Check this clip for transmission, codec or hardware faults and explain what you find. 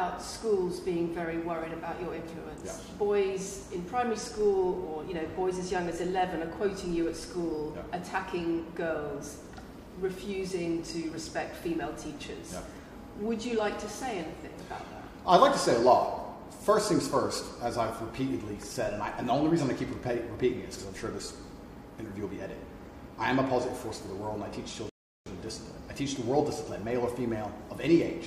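One fault stands out, a rebuffering stall near the end. From 24.89 s to 25.26 s the sound drops to silence. It then picks up exactly where it stopped. The playback ran dry of downloaded audio and waited for more data to arrive. No material is skipped or repeated. Instead the gap adds about 0.37 s to the running time. It is heard as an abrupt halt, a brief dead pause, then a clean restart.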